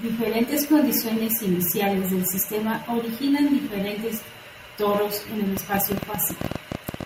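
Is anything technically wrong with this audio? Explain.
Yes. From 5.57 s to 7.04 s there is a train of clicks, roughly twenty of them at about 12.3 per second, spaced irregularly. The cause is likely electrical interference from nearby equipment or a faulty connection or power supply, injecting near-identical pulses into the signal path. They sound like uneven ticking laid over the speech, peaking around 10 dB above it, and they remain audible in the gaps between phrases.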